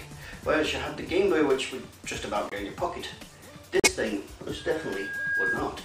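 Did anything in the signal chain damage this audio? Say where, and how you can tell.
Yes. Corrupt frame muted at 2.49 to 2.53 s and 3.80 to 3.88 s, in the codec: the decoder rejected damaged frames, leaving abrupt silences that fit two and three lost frames.

Loudspeaker feedback squeal from 4.57 to 5.73 s, in the acoustic playback loop: a 1.6 kHz tone swells over roughly 0.7 s to about 5 dB above the sound as microphone-to-speaker gain exceeds one.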